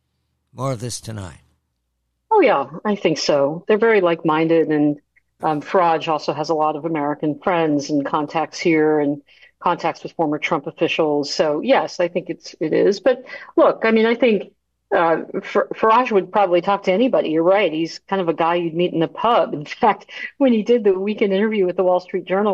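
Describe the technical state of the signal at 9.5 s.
At 9.5 s, clock slip clicks run from 0.23 to 22.45 s: faint ticks about every third of a second, likely single-sample slips from unsynchronised clocks around 70 ppm apart. Their steady spacing distinguishes them from random dropouts.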